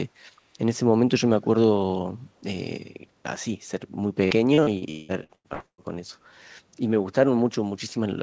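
A speech clip in which, from 1.42 to 1.48 s, a faint copy of the talker returns about 211 ms late and roughly 30 dB below the direct voice. This echo leak is likely from a loudspeaker at the far end whose echo canceller let some pickup through. On a spectrogram it appears as a weak, offset repeat of the preceding harmonics. From 4.25 to 5.81 s there is repeated packet loss with a robotic sound. Nine short holes, the longest 181 ms, are patched by stretching the last sound, so about 42% of that span is synthetic fill. The waveform shows repeated cycles, and the spectrogram shows smeared, frozen harmonic bands between abrupt breaks. The call path leaves nothing above 8 kHz, which fits a 64 kbps G.722 wideband codec.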